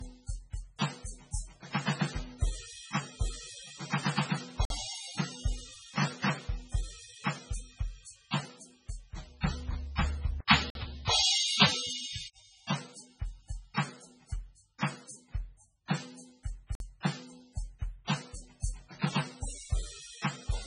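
Music, carrying MP3 compression damage throughout, most likely from encoding at a very low bitrate, around 16 kbps. The encoder has dropped everything above 10.4 kHz, and its bit starvation is heavy: weak frequency lines switch on and off between frames, so sustained tones take on a watery, swirling quality, bright transients turn metallic and chirpy, and attacks smear instead of landing cleanly. There is also a gap between chunks, heard as a 50 ms hole at 4.65 s, 10.70 s and 16.75 s. The spacing is about 6 s, which points to the stream being handled in 6-second chunks with silence inserted at each join, so the music is interrupted at each join even though none of it is lost. Between 10.41 s and 12.36 s the sound changes character, with an 80 ms silence at the switch, a level shift of around 5 dB, and a new background noise floor sitting well below the music. This is likely the input switched to a poorer device mid-recording. 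That device passes nothing above 10.5 kHz, close to the codec's own ceiling, so the change is heard mostly as a difference in level, tone and noise rather than added dullness. The original sound returns at 12.36 s.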